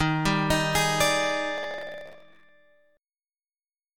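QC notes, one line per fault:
1.58–2.49 s, processor overload crackle: a dense, gritty tearing rides on the sound for nearly a second and then stops cleanly. The processor was too busy to fill its tiny buffers in time, and dozens of deadlines were missed over that stretch. Each missed block was dropped, not repeated, so the audio jumps ahead with a hard-edged click at every skip. The rapid succession fits a buffer of about 0.7 ms.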